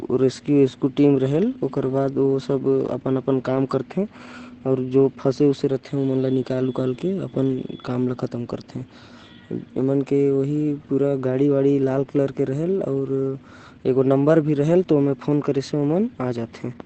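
Throughout the speech, Opus voice compression is running at a low rate, using its linear-prediction SILK coder in wideband, which fits a bitrate near 12 kbps. Nothing sounds above 8.6 kHz, so the speech is plainly muffled, and coarse excitation coding leaves it hoarse and faintly robotic.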